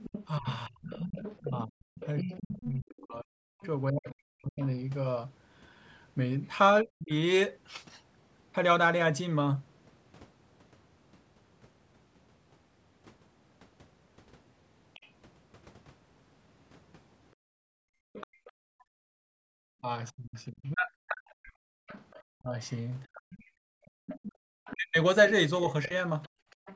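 Right from 0 s to 4.12 s there's a second, quieter voice underneath, about 15 dB down. That's the other side's voice leaking through, likely speaker echo the canceller missed. Overlapping that, from 0.39 s to 7.11 s, the talker keeps dipping, sometimes very deeply, for roughly three seconds in all. It's likely speech suppressed in double talk, with the canceller ducking both voices at once. A faint scrap of leakage pops up at 14.94 s to 15.07 s, around 30 dB down. From 17.36 s to 26.59 s the room tone drops out, by about 40 dB and for around three seconds total. That's background gated by the echo canceller clamping the mic while the loudspeaker plays. The leak comes back from 18.13 s to the end at roughly 20 dB down, likely the same echo path. Between 19.81 s and 25.91 s the talker gets ducked again, deep dips adding up to about two seconds, likely more double-talk suppression. Nothing above 8 kHz comes through, which is just the call's mic processing.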